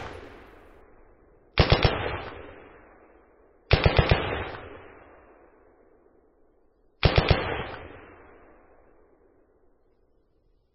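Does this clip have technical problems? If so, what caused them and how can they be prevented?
Yes. At 0.81 s an adaptive stream at a lower bitrate takes over and stays in place to the end: the player, reacting to a slower connection, switched without a gap to a far cheaper encoding, which fits a drop from MP3 at 128 kbit/s to around 16 kbit/s. The change in quality is sudden. Everything above 5.6 kHz is cut away, so the sound turns dull and muffled, and the starved encoder leaves coarse, swirly coding artefacts throughout. Prevention: give the player a larger buffer and a higher minimum bitrate rung, or serve the clip as a download instead of an adaptive stream.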